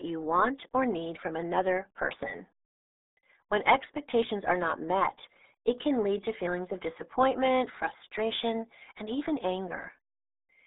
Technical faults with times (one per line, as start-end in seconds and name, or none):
0.00-10.67 RealAudio 14.4 codec